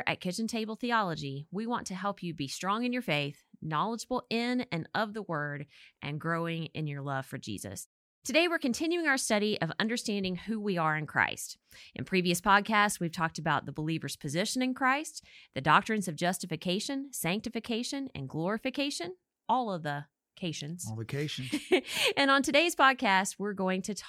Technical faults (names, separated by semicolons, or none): none